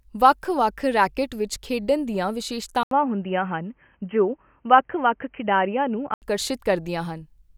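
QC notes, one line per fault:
2.83–6.22 s, input switched to a poorer device. Right after "ਰੈਕੇਟ ਵਿੱਚ ਖੇਡਣ ਦੀਆਂ", the speech drops out for 80 ms. It then returns dull and boxy, with nothing above 3.2 kHz. A faint new noise floor sits far below the speech. Loudness stays about the same. At 6.22 s the full band returns. The input likely moved to a narrower-band microphone or a headset call profile, then back.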